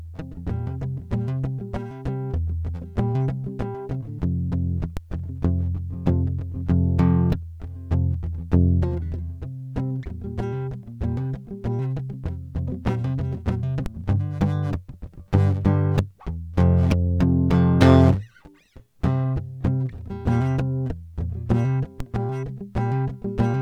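A DC step occurs at 4.97 s, 13.86 s and 22.00 s in this music: each time the waveform's zero line jumps by about -16 dBFS and then drains away through a 20 Hz high-pass, producing a low thump while the music continues unchanged.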